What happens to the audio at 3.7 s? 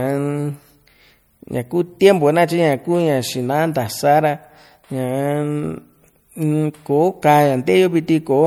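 At 3.7 s you're hearing what's likely MP3 compression, running through the whole clip. The encoder zeroes weak frequency lines that flicker on and off from frame to frame, giving a plainly audible watery, swirly texture and chirpy s sounds, which fits roughly 64 kbps.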